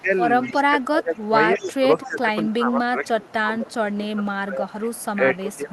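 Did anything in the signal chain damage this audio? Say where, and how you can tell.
Yes. Throughout the clip, from the start to the end, the speech keeps dipping and thinning, pumping down by around 15 dB at its deepest, as if something is ducking it against another talker. This is speech suppressed in double talk, at the call-processing stage. The likely cause is an echo canceller that couldn't tell the near talker apart from loudspeaker echo while both sides spoke, so it attenuated everything rather than risk passing echo.

A faint, delayed ghost of the speech trails behind it at 0.43–0.64 s, 1.55–2.13 s, 3.05–3.33 s, 3.9 s and 4.82–5.39 s. It sits about 20 to 35 dB below the direct sound and lags it by 222 ms. That is echo leak, also from call processing. The likely cause is a far-end speakerphone whose echo canceller left residual pickup of the loudspeaker, which was then sent back down the line.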